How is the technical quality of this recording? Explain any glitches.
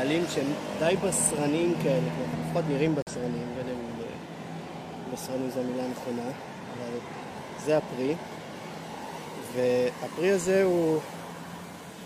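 There is one glitch, a corrupt frame muted, from 3.02 to 3.12 s. Damaged compressed data was rejected by the decoder and replaced with silence, leaving a 0.1 s hole, which fits two codec frames of about 50 ms. Unlike a concealed packet loss, it cuts in abruptly with true silence rather than a smoothed or repeated fill, and the sound resumes on time with no shift.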